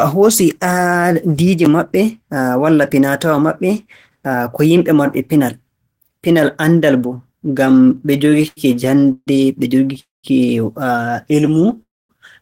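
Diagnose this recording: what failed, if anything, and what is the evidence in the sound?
Repeated stalls (stutter) from 7.77 to 8.59 s, and again more lightly from 11.47 to 11.78 s. This is a network and jitter buffer fault. The first stretch breaks into 13 gaps, the longest 92 ms, about a quarter of it concealed. The buffer kept draining and the receiver stretched the last sound until packets resumed. The second stretch has five gaps of 8 ms or less.

Call audio freezes at 9.12 to 9.29 s, 9.99 to 10.26 s and 11.82 to 12.11 s add gaps of 146, 240 and 270 ms. Each starts as a continued, fading tail and then goes silent for 20, 170 and 230 ms, and the sound resumes intact. The likely cause is packets held up in the network until the jitter buffer ran dry.

Jitter buffer slow-down from 11.32 to 11.67 s plays at about 92% speed with unchanged pitch, adding 35 ms. With its reserve running low or its target delay just raised, the receiver repeated single pitch periods or bits of pauses to build up a reserve, so sounds there are drawn out.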